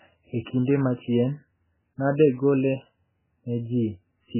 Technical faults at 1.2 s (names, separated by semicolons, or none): MP3 compression